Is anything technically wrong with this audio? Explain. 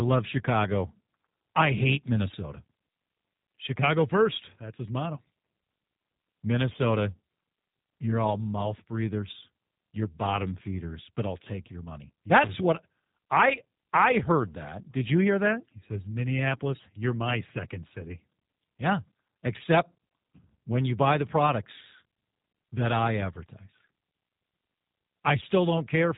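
Yes, there are two faults. Throughout the clip, the speech carries G.729 codec damage: nothing passes above about 3.8 kHz, and the band-limiting fits an 8 kbit/s G.729A-type codec. The codec rebuilds speech from a vocal tract filter model, a pitch predictor and a few pulses per short frame. That shortcut gives the speech a plainly audible rough, synthetic texture, not just the dull sound of a simple low-pass filter.

From 12.42 to 12.49 s there is loose connector crackle. A worn or dirty contact makes and breaks rapidly, chopping the signal, and this is heard as a brief, irregular burst of crackle. Unlike the codec roughness, it is confined to that one short moment.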